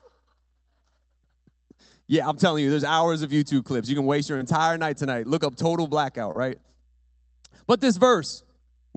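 Short concealed packet loss at 4.37 to 4.42 s and 6.32 to 6.39 s: roughly 20 ms of speech arrived too late each time, so the receiver extended the preceding sound for about 23 and 27 ms, heard as a brief smear or wobble before the speech resumes.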